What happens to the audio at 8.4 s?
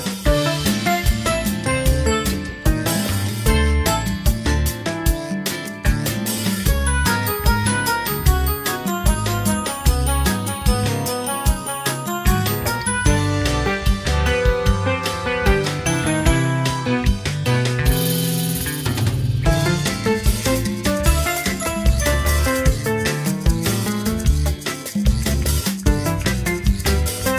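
Nothing goes wrong at 8.4 s; the audio plays through that moment intact, with no dropout, click or distortion.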